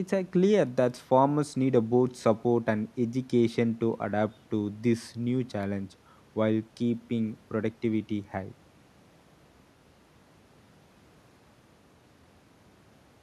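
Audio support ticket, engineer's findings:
No audible faults found on this speech recording.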